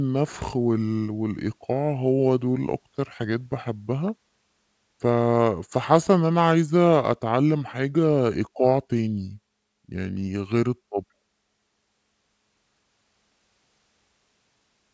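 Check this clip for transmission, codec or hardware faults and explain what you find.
One fault is present. Wrong sample rate, throughout: this fits 22 kHz audio played at 16 kHz, so speech slows to 0.73 speed and drops 5.55 semitones, slow and deep together, unlike a pitch-only shift.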